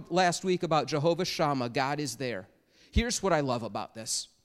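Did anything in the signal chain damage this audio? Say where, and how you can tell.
Yes. Two bit error spikes, at 0.37 s and 2.06 s, point to a flipped bit in storage or on a digital link. Each is a lone sharp tick, reaching about -32 dBFS and about -26 dBFS, unrelated to the speech around it. On the waveform each is a single sample jumping away from its neighbours and snapping straight back. On a spectrogram each shows as a thin vertical line running across all frequencies.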